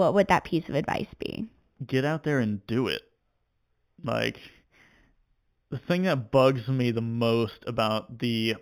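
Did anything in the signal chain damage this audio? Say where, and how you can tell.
Yes. Imaging from linear upsampling at the sample-rate conversion stage: the audio was raised from 8 kHz to 44.1 kHz by joining samples with straight lines. Throughout the speech, the top is dulled and a mirrored copy at 4 to 8 kHz, roughly 25 dB down, adds metallic shimmer to sibilants.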